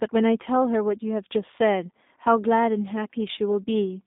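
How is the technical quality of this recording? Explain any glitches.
The quality is limited by low-bitrate telephone coding. The G.729 codec is present throughout the clip. The sound suggests a line of about 200 Hz to 3.7 kHz feeding an 8 kbit/s speech codec. Rather than storing the waveform, the coder keeps only a vocal tract filter shape, a pitch estimate and a few sparse pulses per short frame, then resynthesises the speech. Nothing survives above 3.8 kHz, so the speech sounds muffled and boxy, and the codec damage is plainly audible as a rough, synthetic edge on the speech.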